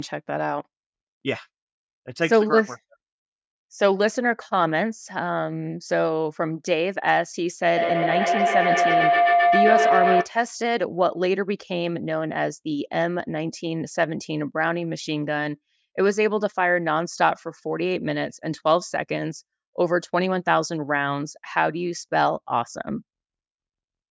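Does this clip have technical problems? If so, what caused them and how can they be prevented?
Yes. From 7.77 to 10.35 s there's a feedback howl: two devices in the room are on the same call, each trip round the mic-to-speaker loop comes back louder, and it locks onto a tone around 700 Hz, pulsing roughly every 150 ms and peaking about 3 dB above the speech. Keep only one device unmuted in the room, or have everyone wear headphones.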